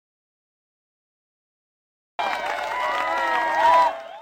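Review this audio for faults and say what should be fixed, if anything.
The input signal was likely lost before capture began, and the recorder kept writing zeros, an audio dropout to silence. From the very start until 2.19 s there is complete silence with no room tone, then the sound arrives abruptly in mid-flow. Confirm the input device is connected, live and unmuted before recording starts.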